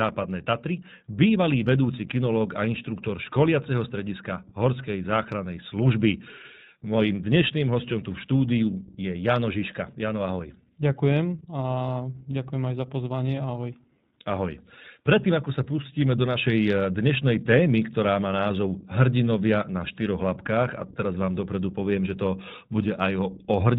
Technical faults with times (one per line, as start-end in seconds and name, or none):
0.00-23.79 iLBC codec